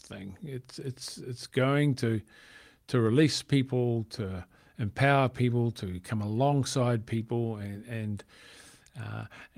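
A speech recording with nothing technically wrong with it.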